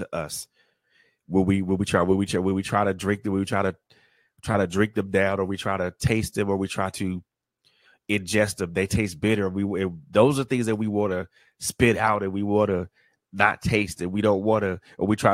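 No technical faults are audible anywhere in the recording.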